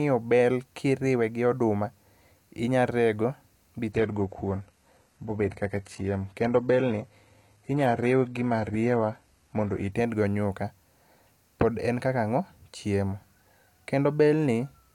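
From 3.92 s to 9.92 s the speech drops to an adaptive stream at a lower bitrate: the connection slowed, so the player switched to a cheaper encoding for six seconds and then switched back. The change is abrupt, with no gap. Treble thins, which fits a jump from a mid-rate AAC stream to a very low-rate HE-AAC one. On a spectrogram, energy above about 12.3 kHz vanishes in a sharp-edged block, while the waveform stays continuous.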